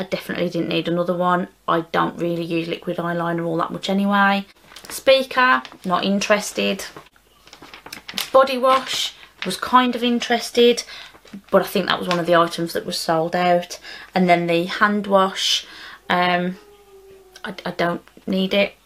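No technical faults can be heard anywhere in this recording.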